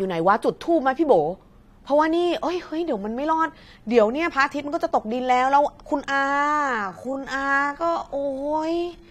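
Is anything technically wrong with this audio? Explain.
Yes. From 6.11 s to the end, a time-stretched section slows the speech to about 0.56 speed, so it drags. Pitch stays put, unlike a slowed recording, likely from software repeating short pieces.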